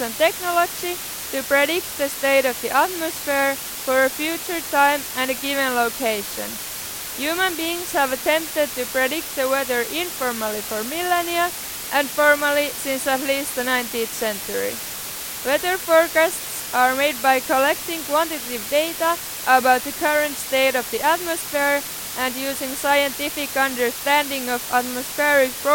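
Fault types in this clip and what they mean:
Low bit depth with dither: The speech has been reduced to very coarse amplitude steps, with random dither added before each sample was rounded. The rounding error becomes a broadband hiss rather than gritty distortion. In this clip the hiss is constant and even for the whole recording. It sits only around 10 dB below the speech, so it is loud and masks quiet detail. The noise level points to roughly 5-bit resolution.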